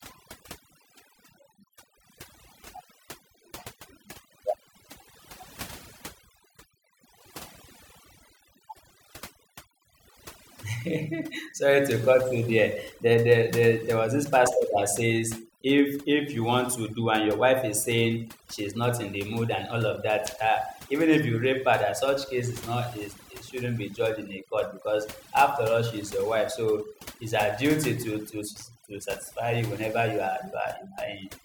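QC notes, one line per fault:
Throughout, overdone noise removal: the speech was put through noise reduction set far too aggressively. Individual frequency bands are pulled right down or switched off whenever their level sits close to the tool's noise estimate, so the background drops and breaks up into twinkling, chirpy specks. Softer components of the voice fall below that threshold and get stripped along with the noise.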